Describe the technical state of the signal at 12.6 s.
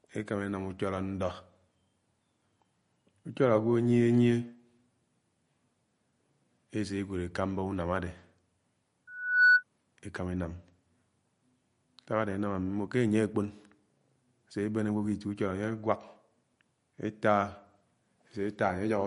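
At 12.6 s the speech has a plainly audible watery, swirly quality, with nothing above 10.6 kHz, as it does throughout the clip. This is likely MP3 compression at a low bitrate, around 40 kbps, where weak frequency lines are dropped and return frame to frame, and the treble is cut.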